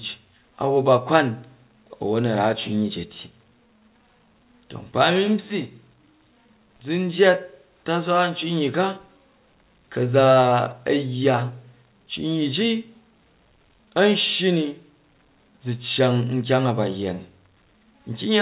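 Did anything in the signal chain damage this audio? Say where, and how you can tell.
No, the speech passed through a WebRTC call path that worked normally, with nothing above 4 kHz, a band limit that fits a G.711 A-law codec running at 64 kbps.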